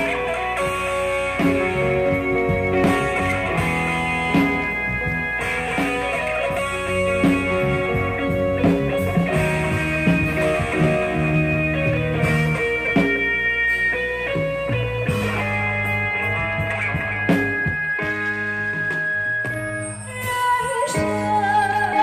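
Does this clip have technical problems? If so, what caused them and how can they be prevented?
Yes. A screen or video cable has coupled into the audio path, producing video or display buzz from the start to 15.42 s. The interference follows the picture's 60 Hz field rate, so it is heard as a steady buzz with a layer of hash above it, sitting roughly 20 dB below the wanted sound until it stops at 15.42 s. To prevent it, route audio cables away from displays and video leads, and use balanced, properly shielded connections.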